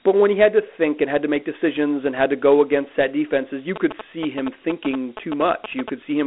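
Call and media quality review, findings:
Dialogic VOX ADPCM throughout: 4-bit ADPCM, 32 kbps fitting 8 kHz sampling; line band 250 Hz to 3.5 kHz, nothing above 3.9 kHz, plainly audible gritty hiss trailing speech.

GSM signalling bursts, 3.76 to 5.90 s: nearby 2G handset signalling, rectified by audio circuitry; galloping dit-dit-dit of short 217 Hz buzzes, around 10 dB below speech.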